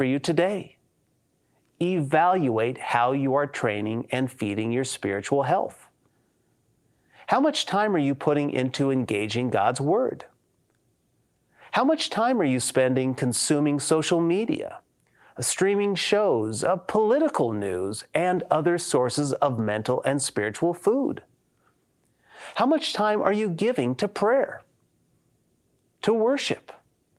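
The recording is of speech, and nothing in it is technically wrong. There is no moment that calls for a time stamp or a cause.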